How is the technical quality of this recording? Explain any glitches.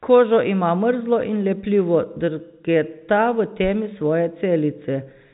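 No glitches are audible.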